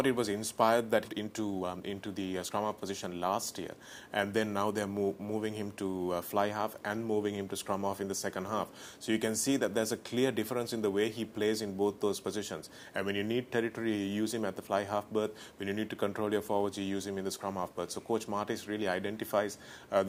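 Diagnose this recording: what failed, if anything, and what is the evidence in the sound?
Network and jitter buffer: a skip ahead at 1.05 s. The sound jumps forward with no fill, losing about a second of audio. The buffer discarded a late stretch while newer audio was queued, and the two sides are butted together almost directly.

Jitter buffer, immediately after: a jitter buffer speed-up from 1.09 to 3.36 s. Playback runs at 124% speed with the pitch unchanged and sounds hurried. The receiver repeatedly cut short pitch-period segments, about half a second in total, to shrink excess buffered delay.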